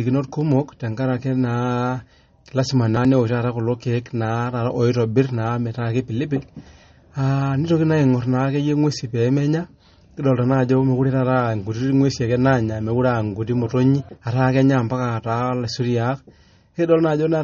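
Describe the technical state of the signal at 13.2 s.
At 13.2 s the speech carries MP3 compression damage that runs through the whole clip, likely from an encoder starved of bits, at a rate that fits roughly 32 kbps. With so few bits, it discards everything above about 8.1 kHz and zeroes quieter frequency lines that flicker on and off between frames. The result is plainly audible: dull, band-limited speech with a watery, swirling texture, metallic chirping on s sounds, and smeared consonant onsets.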